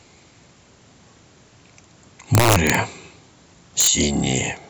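Speech with integer overflow from 2.35 to 2.75 s, about 5 dB over, and 3.81 to 3.87 s, about 2 dB over. Peaks wrap to the opposite sign rather than flattening, giving violent cracks far sharper than clipping.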